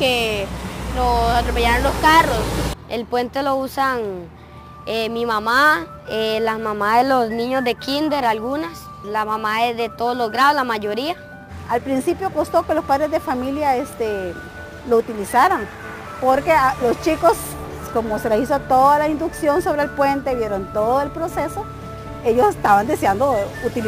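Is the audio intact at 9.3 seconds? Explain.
No, at 9.3 s there's sample clock jitter, which runs through the whole clip. The converter's timing wobbles by several microseconds, so steep, loud passages pick up an error roughly 25 dB down, a grainy hiss that swells with the signal.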